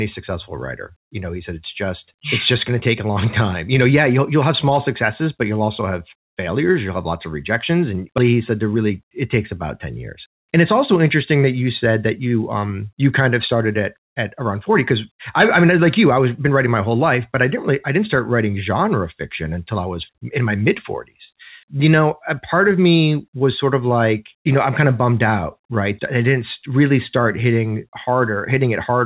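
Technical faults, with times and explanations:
8.18–8.32 s, skip ahead: roughly 0.7 s of speech is lost, and playback jumps straight on with only a 17 ms join and no silent gap, because a stretch of audio was dropped while later audio was already waiting. The waveform shows an abrupt splice; spectrogram formant tracks break off and restart mid-pattern.
8.75–9.26 s, jitter buffer speed-up: speech runs at 109% speed with pitch unchanged, sounding hurried, as the buffer trims a few pitch periods at a time, about 50 ms in all, to shed excess delay. The spectrogram keeps harmonic spacing below 4 kHz while syllables compress in time. The waveform shows periodic cycles removed at intervals.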